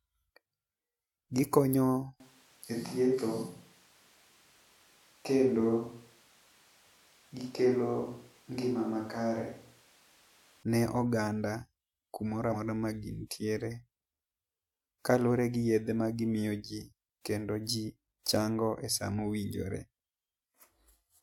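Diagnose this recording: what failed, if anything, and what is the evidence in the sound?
Switch to a distant microphone, 2.2 to 10.63 s: the speech abruptly turns roomy and hollow, with thinner bass and room noise about 30 dB below it, while the level barely changes. The stage is capture, most likely a failed close microphone leaving only a farther pickup in the mix.

Compressed frames skipped, 12.52 to 12.55 s, right after "oganda ku moro": the audio jumps ahead roughly a tenth of a second. This points to about two lost codec frames of 46.4 ms, dropped in storage or rejected by the decoder.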